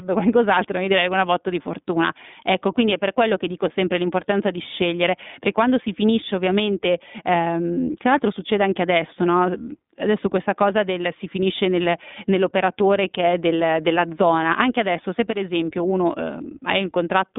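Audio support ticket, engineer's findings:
iLBC codec, throughout: narrowband, nothing above about 3.7 kHz, line band 200 Hz to 3.6 kHz. Each 20 ms frame coded independently, plainly rough, synthetic speech texture, consistent with roughly 15.2 kbps.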